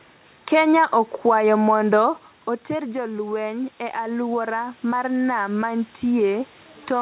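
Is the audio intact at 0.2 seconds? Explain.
Yes, the audio is intact at 0.2 seconds, with the speech carried normally through the call path at that moment.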